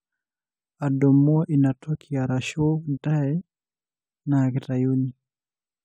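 No technical faults turn up at any point in the recording.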